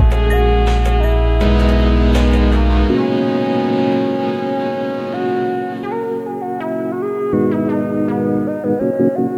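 The player opened the adaptive stream at a low bitrate, which sounds like HE-AAC near 20 kbit/s. From 0.0 to 6.0 s the music's treble is synthetic and codec artefacts are stronger. At 6.0 s it jumps, without a gap, to clearer sound fitting AAC-LC at 96 kbit/s, with nothing above 14.9 kHz.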